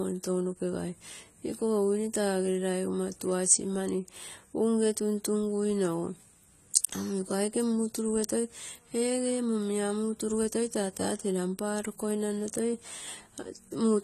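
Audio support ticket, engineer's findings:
AAC compression, throughout the speech. Dull, smeared top end, nothing above 14.1 kHz; fizzy, warbling sibilants. Likely AAC-LC encode at a low bitrate, fitting roughly 32 kbps: coarse quantisation drops and noise-fills high bands, lowering the cut-off.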